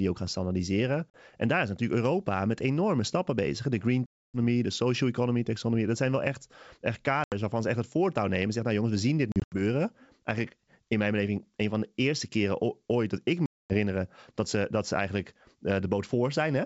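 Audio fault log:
1.10–1.17 s, 4.06–4.38 s, 7.24–7.33 s, 9.32–9.60 s, 13.46–13.74 s: packet loss on an ADPCM call. Packets were dropped and replaced by silence, so the G.722 decoder's adaptive predictor and step size drifted away from the sender's. The sound cuts to abrupt holes of 40 ms after "ook gaan standaardiseren", 280 ms before "de social economy taxonomy", 80 ms between "zijn wel echt echt" and "waarvan ze echt het", 140 ms scattered over 200 ms, and 240 ms. Each hole ends in a slightly distorted restart that settles within tens of milliseconds.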